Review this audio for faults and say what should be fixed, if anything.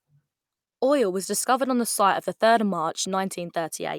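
Nothing needs fixing: the speech signal is continuous, uninterrupted audio throughout.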